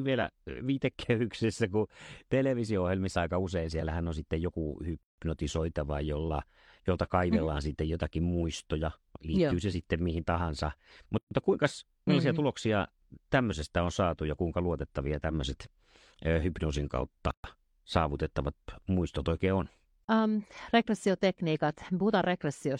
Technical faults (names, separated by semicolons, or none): gap at a join of encoded pieces